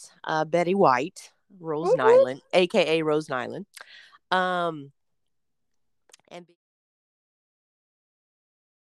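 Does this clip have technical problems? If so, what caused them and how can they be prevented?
No, nothing in this speech clip points to a technical problem. Near the end the level fades out smoothly, as an editor would do it, beginning at roughly 6 s and reaching silence by 6.57 s with no click or hard edge.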